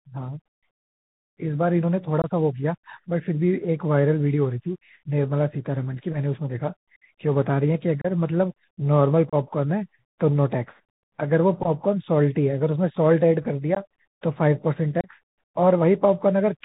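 Throughout, the speech carries the Bluetooth CVSD headset codec. Nothing above 4 kHz survives. Loud high sounds outrun the adaptive step, s sounds turn scratchy, and a granular hiss sits underneath.

Unconcealed Bluetooth headset packet loss cuts short holes at 2.22–2.25 s, 8.01–8.07 s, 9.30–9.35 s, 13.75–13.77 s and 15.01–15.08 s. Each gap spans a few packets, about 15 to 30 ms. The edges are abrupt, and the speech returns briefly quieter.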